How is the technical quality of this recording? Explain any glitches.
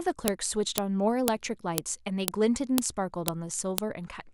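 The recording has a repeating glitch: sharp clicks at regular intervals. The file header is being played as audio at 0.28, 0.78, 1.28, 1.78, 2.28, 2.78, 3.28 and 3.78 s, once every 0.5 s. Header bytes left at each joined piece play as samples, making loud snaps that show as thin full-band vertical lines on a spectrogram and narrow spikes in the waveform.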